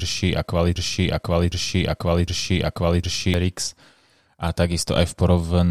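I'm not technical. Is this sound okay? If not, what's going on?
No, there's a broken-record loop from 0.76 to 3.34 s: a 0.76-second chunk of speech repeats three times, likely a stalled player, so whatever came next is lost.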